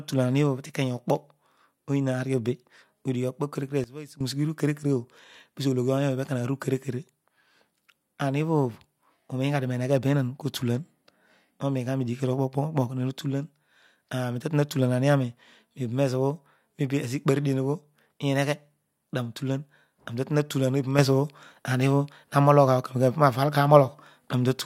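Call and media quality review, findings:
Sudden gain jump, 3.84 to 4.21 s: speech and background noise drop together by about 16 dB in a single step, then return at once. Likely a digital gain setting applied without a ramp.

Sudden gain jump, 20.99 s to end: speech and noise floor step up together by about 6 dB, no fade, and stay raised. Same mechanism, likely an unramped gain change or bit shift.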